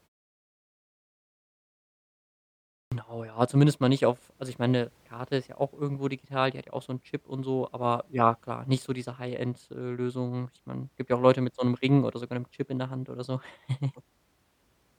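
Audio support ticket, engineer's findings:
Output device sleeping through the 2.83 s of leading silence, too slow to wake or relock: clipped start after a pause. At 2.83 s roughly 86 ms swallowed, so "ja zumindest mal nicht" begins abruptly, first sounds missing.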